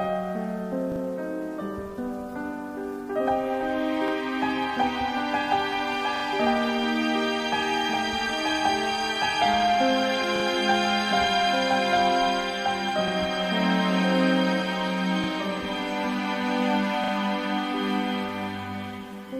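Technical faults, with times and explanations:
0.92–1.0, 4.08–4.12, 6.16–6.24, 10.36–10.44, 13.08–13.12, 15.24–15.28 and 17.04–17.12 s, repeated buffer: each time a short slice of sound plays again, with a hard seam at each repeat. That gives a quick stutter or click. The repeats come in 40 ms steps, which fits a 40 ms buffer. The 0.08 s ones loop twice and the others once. Fresh audio wasn't ready in time, so the device replayed its last block, and essentially nothing seems to go missing.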